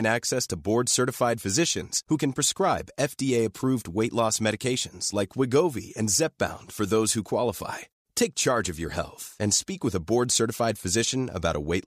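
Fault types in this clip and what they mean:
No technical faults are audible.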